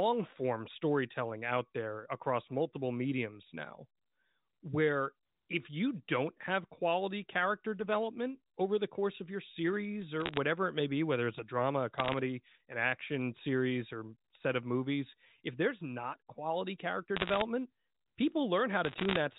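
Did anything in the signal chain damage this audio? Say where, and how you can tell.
Yes. Bit errors on a digital phone line struck the G.711 stream in the network stage, in four short bursts: 10.20 to 10.37 s, 11.98 to 12.18 s, 17.17 to 17.42 s and 18.85 to 19.18 s. Each flipped bit corrupts a single logarithmic sample, and sign or high-order hits jump far from the waveform, giving sharp ticks that pile into crackle over otherwise intact speech. The density suggests an error rate near one percent at worst.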